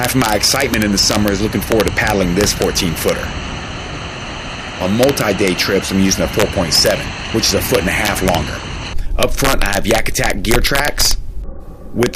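Integer overflow runs through the whole clip. The signal path is driven about 4 dB past full scale. Any sample that should have been held at the maximum instead wraps around to the opposite extreme of the integer range. Only a tiny share of samples, around one in a thousand, cross that limit. Those land on the loudest peaks as abrupt, violent cracks, far harsher and more explosive than ordinary clipping.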